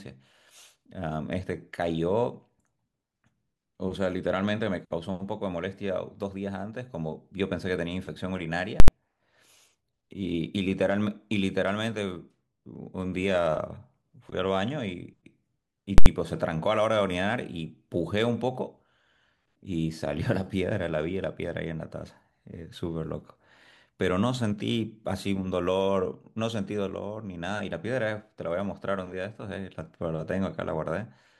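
A calculation twice produced invalid numbers at full scale, infinite or undefined values pinned to one extreme value for an 80 ms block, at 8.8 s and again at 15.98 s. Each block replaces the speech with a short, harsh bang before the audio resumes.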